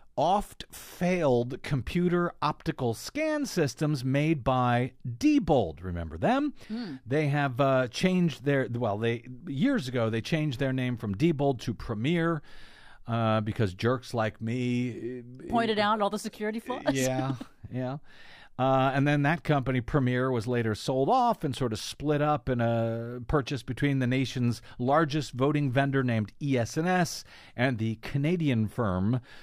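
No technical faults can be heard in the speech.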